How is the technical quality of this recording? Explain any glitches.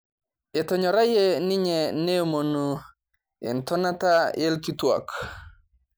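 No technical faults are audible.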